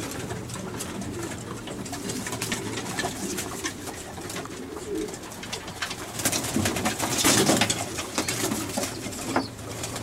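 Abrupt jumps in the sound occur at 2.54, 4.30, 7.25, 8.34 and 9.24 seconds, with no gap of silence at any of them. These are most likely dropped buffers from an overrun: the program failed to collect incoming samples before the hardware overwrote them, so a few milliseconds vanish and the surrounding audio is spliced directly together. Around 5 ms is lost at most points, roughly twice that at 8.34 s.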